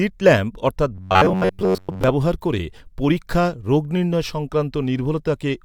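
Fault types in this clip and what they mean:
Robotic sound from repeated short buffers: from 0.95 to 2.04 s, after "ল্যাম্প অর্থাৎ", the speech becomes a stiff metallic drone pinned near 94 Hz, likely because audio arrived too seldom and a slice of about 11 ms was looped, covering most of the real signal until "ব্যবহার করে পরীক্ষা রোগ".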